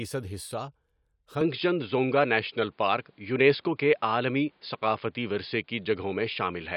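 From 1.41 s to the end, the speech turns dull and boxy with nothing above 5.1 kHz, a small level shift and faint new background noise, likely an input switched to a poorer device.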